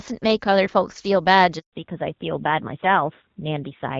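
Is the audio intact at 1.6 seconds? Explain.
No. A handover gap from 1.59 to 1.73 s: while the call switched networks, no speech frames arrived, so the speech cuts out for 140 ms.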